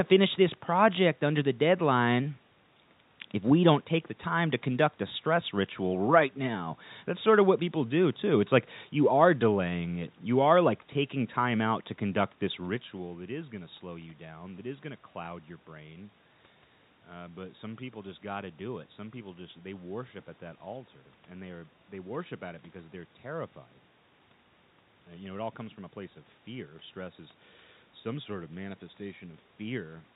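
Speech over a narrowband telephone path with no technical faults; the room background and a level change partway through, where the talker shifts position, belong to the recording itself.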